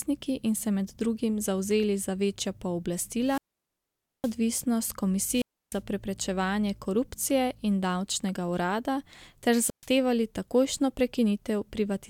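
Three wireless microphone squelch dropouts occur at 3.23–4.37 s, at 5.30–5.81 s before "preprečevanje korupcije in davčnega", and at 9.64–9.87 s after "in davčnega urada ter". Each time, hiss rises as the radio signal fades, then squelch mutes for 0.86, 0.30 and 0.13 s. That rising static, rather than a clean cut, separates it from a digital dropout.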